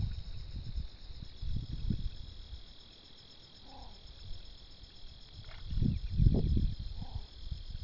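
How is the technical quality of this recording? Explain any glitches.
The recording has a gritty, metallic edge throughout, from aliasing. Content above 6 kHz has folded back down into the band as wrong, unrelated tones, about 25 dB below the main sound. This fits a downsample to 12 kHz done without an anti-aliasing filter.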